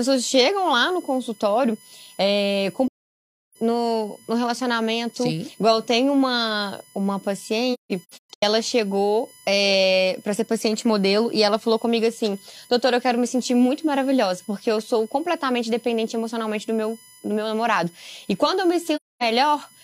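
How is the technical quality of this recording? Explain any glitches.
The recording is impaired by a constant electrical whine and by three soft-edged dropouts in the speech.

USB whine runs through the whole clip at a fixed 1 kHz pitch, strongest at its 10 kHz harmonic and about 30 dB below the speech. Current drawn in the bus's 1 ms frames leaks into the audio through power or ground. Unlike mains hum, it sits high at kilohertz multiples rather than at 50 or 60 Hz.

AAC frame loss with muting causes three gaps. The first runs from 2.87 to 3.57 s, between "no consultório é com" and "no no relacionamento". The second, from 7.73 to 8.43 s after "tem uma uma" and before "ela chegou é para", loses 469 ms in pieces, the longest lasting roughly 150 ms. The third, from 18.96 to 19.23 s after "quando eu me", loses 256 ms. The decoder zeroed the missing frames' spectra, and the overlapping windows fade the sound out and back in. 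That gives smooth holes rather than the abrupt, clicking cuts of a raw sample dropout.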